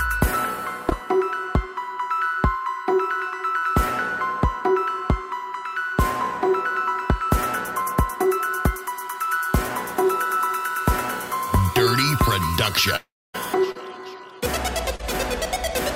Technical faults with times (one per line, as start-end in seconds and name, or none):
0.89-0.93 short concealed packet loss
3.59-3.64 short concealed packet loss
7.82-7.88 short concealed packet loss
12.96-13.36 long network dropout
13.72-13.78 short concealed packet loss
14.96-15.01 short concealed packet loss